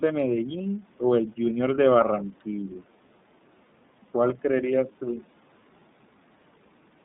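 From start to finish the speech sounds thin, boxed-in and slightly rough, with a synthetic, buzzy edge that is plainly audible. Nothing reaches below about 150 Hz or above 3.7 kHz. This is iLBC codec damage. The narrowband VoIP coder rebuilds the excitation of each 30 ms block independently of the one before. The rough texture and the ceiling near 3.7 kHz fit the 13.33 kbps iLBC mode.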